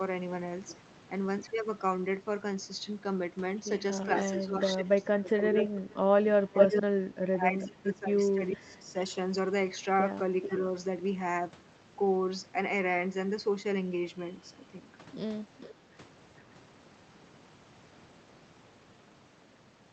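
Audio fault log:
4.08–5.81 s and 6.51–8.95 s, speech suppressed in double talk: the talker dips in pieces, by about 15 dB and then about 25 dB, likely an echo canceller ducking both sides during overlap.
4.13–4.32 s, 5.03–5.93 s, 6.58–6.82 s, 10.42–10.56 s, 15.6–15.74 s, echo leak: a copy about 0.43–0.45 s late, once louder than the speech, likely loudspeaker echo escaping cancellation.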